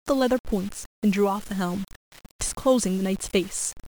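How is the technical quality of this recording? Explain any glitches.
Technical quality is poor: low bit depth without dither affects the entire speech recording. Grainy distortion tracks the voice and changes with it, sitting roughly 20 dB below the signal. Quiet passages turn gritty. The likely cause is undithered rounding to very few levels, consistent with about 6-bit resolution, so the error is tied to the waveform rather than spread as neutral hiss.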